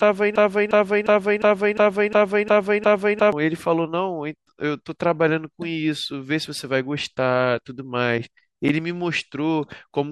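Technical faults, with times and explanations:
0.36 to 3.32 s: broken-record loop. A slice of about 0.35 s plays back to back eight times. Each pass is identical. The repeats hold for nearly three seconds, and nothing new comes through until the loop lets go. The likely cause is a stall in the player, encoder or stream, which kept resending the last fragment it held. Whatever should have played across that span is lost.
8.69 s: gap at a join of encoded pieces. A silence of about 8.7 ms opens in continuous sound. The codec smears its edges, so the silent part is shorter. The sound then carries on from exactly where it stopped. This fits pieces encoded separately and joined without trimming. The silence at the start of each encoder run and the padding in its last frame both stay in, leaving a short hole at the seam.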